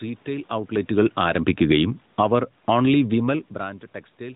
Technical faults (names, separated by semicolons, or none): automatic gain falling